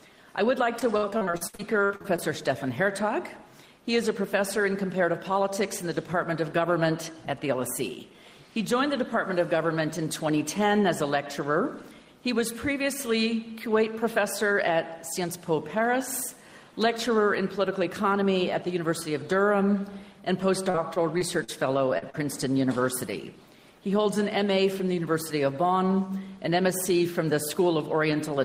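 From 0.79 to 2.20 s there is repeated packet loss, heard as a robotic, choppy stretch. Packets kept failing to arrive in time, and the receiver patched each hole by extending the last received sound. Thirteen gaps fall in this window, the longest about 63 ms, and synthesized fill makes up roughly 30 percent of the span. The result is choppy sound broken by missing fragments. A shorter episode of the same fault runs from 20.70 to 21.50 s. It has four gaps, the longest 39 ms, with about 15 percent of the span concealed, so it is a lighter episode than the first.

Just after that, two short concealed packet losses occur, at 21.98 s and 22.10 s. Each is a hole of about 40 ms that the decoder filled by continuing the preceding sound and then blending back into the received audio. Each shows up as a small smear or wobble, and they sit only about a tenth of a second apart, trailing the second robotic stretch.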